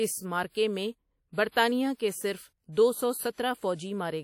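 Throughout the speech, plainly audible damage likely comes from WMA compression at a low bitrate, around 48 kbps by the sound. Long transform blocks smear ringing, washy noise around each syllable, with hiss that swells and fades with the signal. A spectrogram shows nothing above 19.5 kHz and patchy, zeroed gaps in weaker bands.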